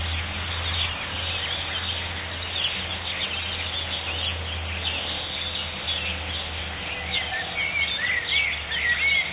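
No technical faults are audible.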